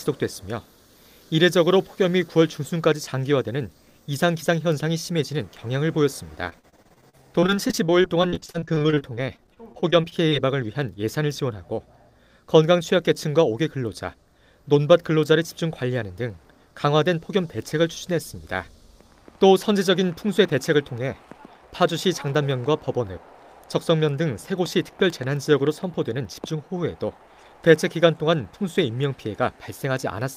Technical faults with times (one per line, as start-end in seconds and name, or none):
6.49-10.33 repeated packet loss (robotic sound)